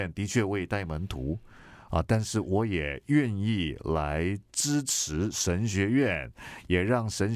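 Nothing in the speech stood out as a technical problem on listening.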